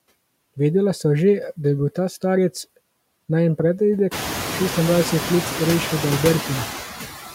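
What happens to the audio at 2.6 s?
At 2.6 s the speech carries noise suppressor artifacts, present throughout the clip. The suppressor cuts bands it judges to be steady noise by about 15 dB, frame by frame, so the residual noise pumps between and under syllables.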